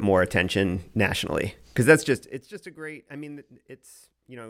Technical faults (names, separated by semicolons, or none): zipper noise